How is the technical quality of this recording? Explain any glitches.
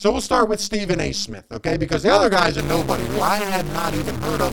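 The recording has two technical faults: a constant overlap-add ripple and, in its second half, a stuck-bit distortion.

Overlap-add ripple runs through the whole speech clip. The audio was split into windowed frames and rejoined with an overlap whose gains don't add up to a steady level, so the loudness dips once per frame, here at around 200 Hz and with a depth of about 60 dB. That turns the sound into a metallic buzz with extra tones around the voice. Unlike ordinary distortion, it is a regular level modulation locked to the frame rate rather than to the waveform itself.

From 2.59 s to the end, a distortion sets in, likely caused by a stuck bit, where one data bit is held at 0 or 1 by a faulty line or converter. Roughly half the sample values are then pushed off by that bit's weight, following the waveform's shape. What separates it from clipping is that quiet gaps also fill with noise, because small values near zero flip that bit too.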